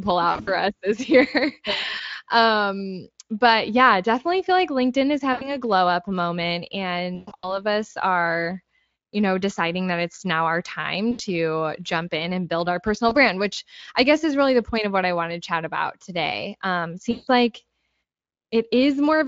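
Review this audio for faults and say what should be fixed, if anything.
VoIP packet loss concealed by the speech codec occurs at 0.31–0.50 s, 5.33–5.56 s, 7.15–7.62 s (after "glow up moment", before "us are you know"), 11.11–11.21 s (after "that it's now our"), 13.09–13.16 s (between "and build our personal" and "which I guess is"), and 17.11–17.28 s. The Speex decoder fills the gaps by extending the last pitch into a fading buzz, unlike a plain dropout's abrupt silence, and the voice stays weak briefly afterward. Fix it with a jitter buffer, forward error correction or a more reliable network path.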